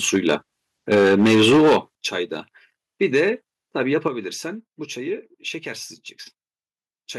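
From 0.13 to 0.35 s the loudest peaks turn harsh and crackly. This is likely microphone overload: the input runs about 5 dB past the converter's limit, so the waveform tops are sheared flat. At 0.95 s the level dips by about 2 dB. It is likely a microphone volume step down, with software trimming input gain in one move. The overload returns from 0.91 to 1.77 s and is much worse, about 10 dB over. Roughly a fifth of the samples are clipped, and the sound gets a gritty, buzzing edge. At 1.95 s the sound and background drop sharply, by about 10 dB. From 3.02 to 3.29 s a brief, faint crackle returns, only about 2 dB over. At 4.08 s the level falls again, by about 7 dB.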